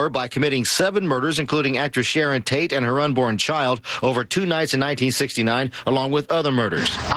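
Gain pumping runs through the whole clip. The gain swings by around 10 dB under each loud sound. Loud and quiet passages sit squashed close together, likely from input gain set far too high and a fast limiter clamping down on each peak.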